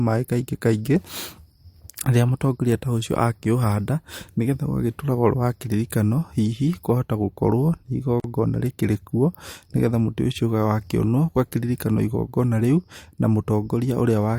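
Speech clip with a gap at a join of encoded pieces: sound drops out for about 42 ms from 8.2 to 8.24 s, just before "rĩkĩrĩ kuo", where separately encoded segments were joined untrimmed, leaving the encoder's start delay and final-frame padding in place.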